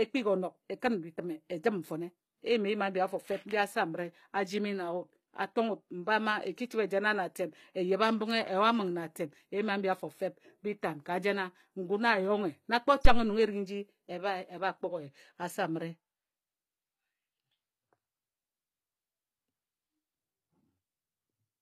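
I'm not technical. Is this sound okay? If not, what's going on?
No. Two faults are audible in this speech recording.

Throughout the clip, the high end sounds artificial: s sounds and other hissy consonants come across gritty, metallic or lispy, though the treble still seems bright. This is likely HE-AAC compression, a low-data audio format that stores only the lower part of the sound properly and fills in the upper part by copying the lower bands upward. That rebuilt treble doesn't match the real voice, which is why those consonants sound wrong.

From 13.05 to 13.27 seconds there is a phantom power thump: a deep, dull thud that dies away quickly, within about 50 milliseconds. It happens when the power feeding the microphone is switched on or off while recording. The sudden change in voltage passes straight through into the audio as a low bump.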